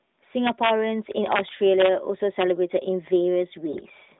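From 3.72 to 3.93 s, near the end of the narrowband speech, AMR bit errors corrupt the less protected bits of about ten 20 ms frames, at roughly one bit in twenty. Mispositioned excitation pulses and slightly wrong pitch, gain and spectral values turn the voice hoarse, scratchy and gargly while its pitch and level roughly hold.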